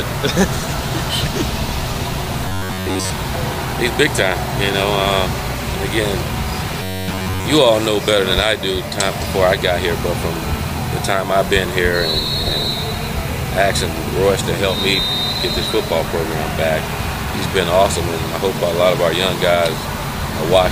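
From 2.48 to 3.10 s and again from 6.82 to 7.45 s, the sound becomes a rigid, metallic buzz pinned near 94 Hz. This is robotic sound from repeated short buffers, likely a slice of about 10.7 ms looped while most incoming audio was skipped. Unlike dropouts, no silent gaps appear.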